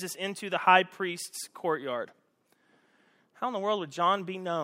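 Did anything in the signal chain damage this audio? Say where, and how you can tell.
No, nothing along the way seems to have harmed this speech, so there's no stage to point a finger at.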